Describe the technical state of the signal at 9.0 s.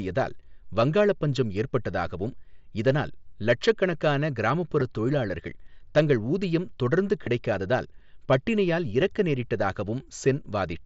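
At 9.01 s there is a concealed Bluetooth headset packet loss. A gap of about 7.5 ms, which fits a single lost mSBC frame, was filled by the receiver repeating the best-matching stretch of the preceding waveform. Because only one packet is missing, the patch is almost inaudible rather than a buzz. That sets it apart from a plain dropout, which would leave a silent hole or a click at the splice.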